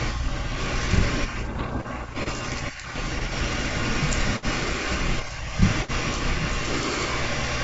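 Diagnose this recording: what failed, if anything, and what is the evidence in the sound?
The transmission stage is at fault, with bit errors on the ADPCM link of the G.722 wideband path. From 1.57 to 1.77 s the speech breaks into pops and a rough, gritty burst with brief level jumps. Even a light error rate does this, because each flipped bit throws off the decoder's step size and predictor, so every hit smears on for a few milliseconds.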